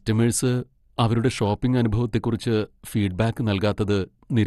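From start to finish the speech sounds dull, with nothing above about 12.2 kHz, and carries a gurgling, granular roughness. This is most likely MP2 compression at a low bitrate, consistent with around 64 kbps: the coder divides the signal into equal sub-bands, switches upper bands off and quantises the rest coarsely. The flickering, grainy texture sets it apart from a plain low-pass filter, which dulls the sound but leaves no such grit.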